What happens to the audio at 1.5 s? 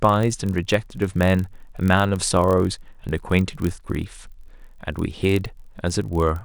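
At 1.5 s the speech carries a steady low buzz at about 43.1 Hz, and it runs at 0.999 times normal speed with its timbre unchanged. This is a block size mismatch (padded), present throughout the clip. One stage writes slightly shorter blocks than the next reads, so each block ends in a brief run of zeros. The buzz rate fits a 1024-sample read block at 44.1 kHz, and the tiny slowdown means the gaps are very short.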